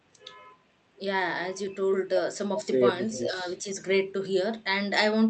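Speech suppressed in double talk appears from 3.08 to 3.46 s and again from 3.62 to 3.98 s. In each stretch the speech level sags for roughly 300 ms, dropping about 5 dB at its deepest, so the sound pulls back without fully cutting out. The likely cause is that both ends were talking at once. The echo canceller could not tell the near talker from loudspeaker echo, so it attenuated everything.

An echo leak sits inside the first dip, from 3.12 to 3.18 s. It is a brief, faint scrap of a delayed copy of the speech, arriving 397 ms late and about 15 dB below the main signal. It most likely comes from a far end playing the call through a loudspeaker. That end's echo canceller failed to remove all of what its microphone picked up and sent this fragment back. It is heard through the call's Opus coding, which limits the audio to an 8 kHz bandwidth.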